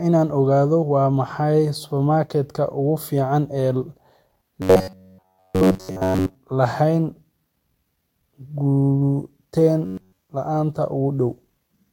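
Speech with robotic sound from repeated short buffers, at 4.62 to 6.35 s and 9.86 to 10.19 s. The voice becomes a rigid metallic buzz near 94 Hz. The likely cause is an 11 ms chunk replayed over and over while new audio is skipped.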